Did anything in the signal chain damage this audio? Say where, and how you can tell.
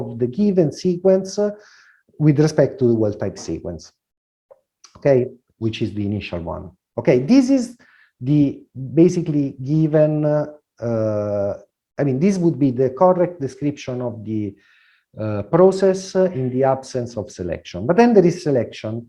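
No, nothing along the signal chain audibly damaged this audio, and there is no stage to point to because the signal holds steady throughout.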